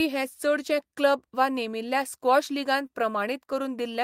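No technical faults can be heard anywhere in this speech recording. Nothing in how the sound was captured or delivered stands out at any point.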